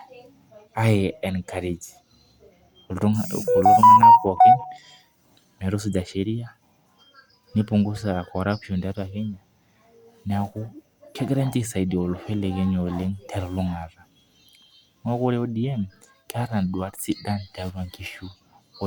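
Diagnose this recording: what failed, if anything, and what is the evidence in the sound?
Nothing in the recording stood out as a failure on listening, so there is no stage to point to and no evidence to cite.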